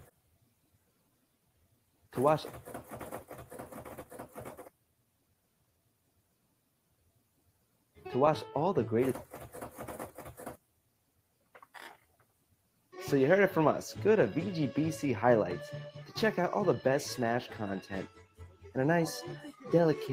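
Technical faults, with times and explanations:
Throughout: noise suppressor applied to music or sounds. A speech-oriented suppressor stays active on non-speech audio, treating sustained tones, ambience and reverb as noise. Level swings by roughly 10 dB, so held material and tails keep sinking and recovering, giving a pumping, thinned character while attacks pass.
0.05–2.13 s, 4.67–8.05 s, 10.55–11.75 s, 11.94–12.93 s, 18.08–18.69 s: sound cut by the noise suppressor. In these stretches the suppressor pulls the sound down harder than elsewhere, dropping it by about 14 to 17 dB at the deepest. Steady or decaying parts sink or get truncated, while sudden onsets survive, unlike the milder, ongoing pumping heard across the clip.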